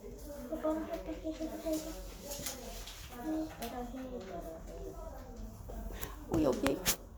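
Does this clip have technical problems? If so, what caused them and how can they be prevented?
No, there are no technical problems to hear in this recording of sounds. With nothing gone wrong, there is no cause to trace and nothing that needs preventing.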